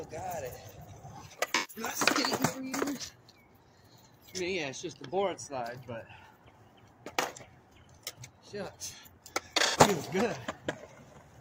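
AAC frame loss with concealment smears the sound from 1.54 to 1.83 s and again from 9.65 to 9.77 s. The decoder briefly stretched the last good spectrum into a noisy, phasey patch rather than a silent gap, which points to about 128 ms and 85 ms of missing data.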